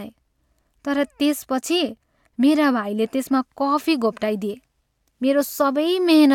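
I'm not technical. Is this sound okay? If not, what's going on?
Yes, this one sounds fine: nothing in the recording drops out, crackles or wobbles, so there's nothing here to worry about.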